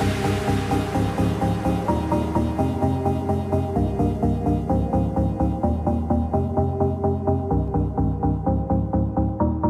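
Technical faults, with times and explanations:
5.94 s and 7.68 s: dropped samples, two single sharp clicks, likely from a fraction of a millisecond skipped so the waveform jumps; unlike a dropout, no sound is lost.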